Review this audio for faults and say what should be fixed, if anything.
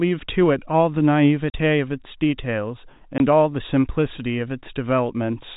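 Packet loss filled with silence cuts the speech twice. A 40 ms gap runs from 1.50 to 1.54 s. A 20 ms gap runs from 3.18 to 3.20 s. Both lengths fit whole 20 ms packets. The receiver put silence in their place, leaving hard edges. The band stops near 4 kHz, as expected from the G.711 telephone coding.

Adding packet loss concealment and an adequate jitter buffer at the receiver would smooth over such gaps.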